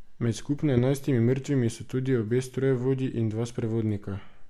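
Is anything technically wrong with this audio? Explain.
Yes. From 0.77 to 0.79 s there is a corrupt frame decoded: flipped bits in what sounds like a couple of compressed frames were played anyway, so misread gains and codes put energy at the wrong frequencies. It comes through as a short chirp or blip, peaking around -15 dBFS, over the speech.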